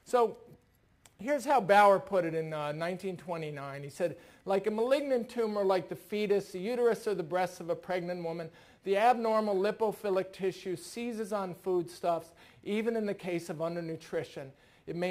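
Crude rate conversion runs throughout, with a gritty, inharmonic fizz trailing loud and bright sound about 30 dB down, pointing to unfiltered nearest-sample 48 kHz-to-44.1 kHz resampling.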